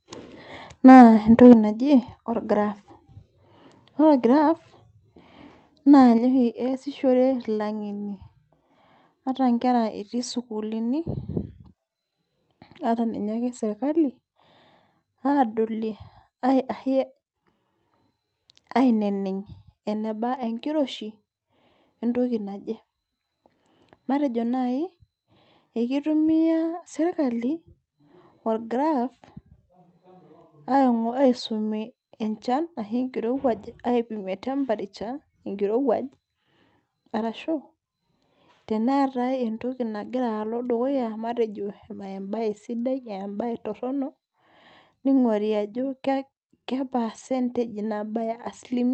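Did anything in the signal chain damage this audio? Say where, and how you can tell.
Yes. Microphone overload at 0.88 to 1.03 s and 1.42 to 1.53 s: the loudest peaks sound flattened and crackly, driven about 3 dB and about 2 dB past the converter's limit. Roughly a tenth, then a twentieth, of samples are cut off, most likely from an input gain set too hot at the converter.

Microphone volume stepped down at 1.53 s, 4.38 s and 6.18 s: voice and background drop together, abruptly, by about 6 dB, 2 dB and 5 dB. The first step follows directly on the clipped peak, which points to call processing likely lowering the device's input volume.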